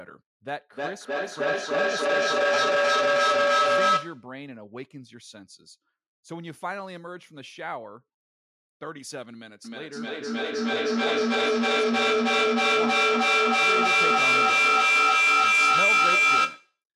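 Feedback echo between two devices runs from 0.71 to 4.35 s. A second device in the room replays this microphone's sound, which is picked up again and escapes echo cancellation, so the speech returns roughly every third of a second, thinner and more ringing each pass, peaking about 13 dB above the speech.

Feedback howl follows from 9.65 to 16.83 s. The same loop now gains level on each trip, so the repeats grow rather than fade and narrow to a tone around 2 kHz. The loop comes round about every third of a second, and the howl reaches about 14 dB above the speech.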